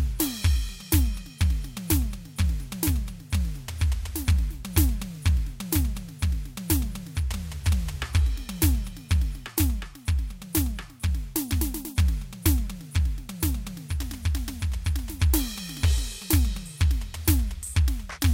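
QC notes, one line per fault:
0.10–18.31 s, clock slip clicks: a soft, steady rattle of ticks roughly every 30 ms, likely single-sample slips between unsynchronised clocks about 700 ppm apart.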